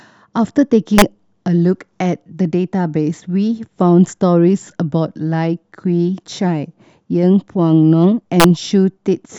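Harsh, violent cracks break through the speech at 0.98 to 1.02 s and again at 8.40 to 8.44 s, far sharper than clipping. This is integer overflow: peaks running about 2 dB and about 1 dB past the integer limit wrapped to the opposite sign instead of being capped.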